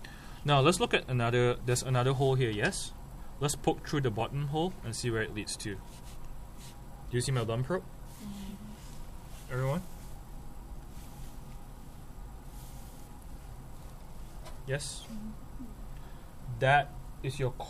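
At 4.21 s and again at 8.11 s the sound jumps forward by a few milliseconds, likely a dropped buffer (overrun), where unread samples were overwritten and the edges spliced. The waveform shows an abrupt discontinuity; the spectrogram, a thin broadband vertical line.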